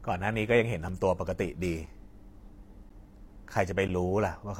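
At 0.89, 1.86, 2.89 and 3.88 s the speech drops out in short holes of about 3, 7, 11 and 11 ms, one per second: a gap between stream segments, where adjacent one-second segments' timestamps don't meet and silence fills the space. Waveform and spectrogram show clean vertical blank slices with hard edges.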